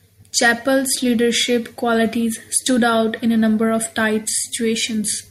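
No technical faults can be heard anywhere in the speech recording, which stays steady and intact throughout.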